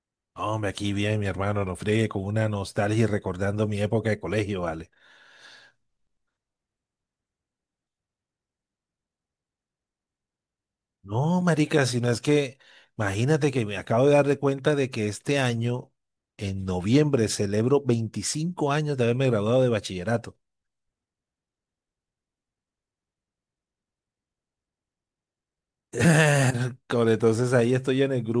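Nothing technical stands out in this speech recording; there's simply no fault to flag here.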